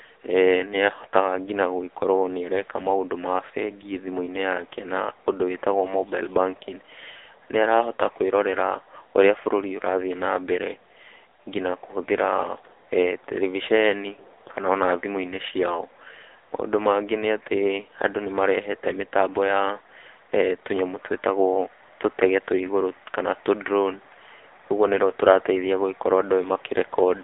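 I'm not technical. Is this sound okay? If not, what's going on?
No, the whole clip has gone through an AMR narrowband mobile codec, the old phone-call squeeze: everything above about 3.7 kHz is gone, and heavy compression leaves the speech buzzy and robotic.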